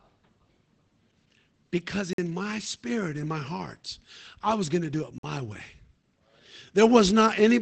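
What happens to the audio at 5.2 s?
At 5.18 s a gap between chunks opens in the stream. The audio was delivered in separate pieces, and at this join a stretch of silence of about 50 ms was left, ending at 5.23 s, instead of the speech continuing directly. No speech is lost, but it stops and resumes, so the moment is heard as a short hole that cuts into the flow of the speech.

Across the whole clip, including this moment, the speech has passed through Opus voice compression in its SILK linear-prediction mode, at a level of damage that fits a low bitrate of around 12 kbps. The coder keeps only a wideband signal, with nothing above 8.5 kHz, and renders the vocal excitation coarsely. As a result, the speech on either side of the gap sounds plainly muffled, slightly hoarse and a little robotic.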